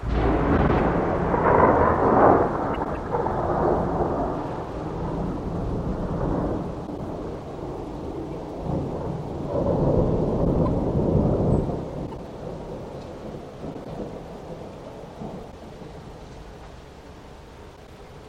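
Neighbouring runs of frames in this everyday-sound recording arrived out of order and were decoded as received, so short stretches play with their halves swapped. At 0.57, 2.74, 6.87, 10.44, 13.74, 15.51 and 17.76 s each swapped half lasts about 104.5 ms, which fits runs of four frames. At 12.06 s the halves are 52.2 ms. Each produces a brief garbled flutter, and no time is lost.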